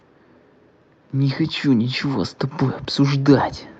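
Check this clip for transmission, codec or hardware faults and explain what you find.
One fault stands out: an automatic gain rising episode from 1.22 to 2.41 s. The gain control judged the input too quiet and ramped its gain up by about 4 dB over roughly a second, so the speech and the background noise swell louder together. The call path's Opus coding limits the top end to around 8 kHz.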